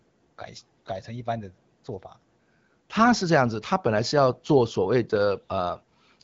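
Nothing stood out as a technical fault on listening to this speech clip, which comes across as an ordinary AMR-WB (HD Voice) call at 12.65 kbit/s.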